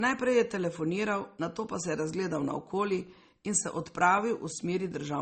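Throughout the speech, the top end stops dead at about 8.5 kHz, and two kinds of codec smear sit together: a swirly, watery haze over a grainier roughness. That layering is likely transcoding between lossy codecs, which fits a low-bitrate MP3 re-encoded as Opus.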